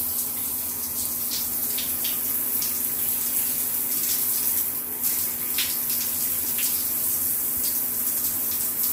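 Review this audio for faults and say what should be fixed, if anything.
No faults can be heard anywhere in this recording. Nothing here needs fixing.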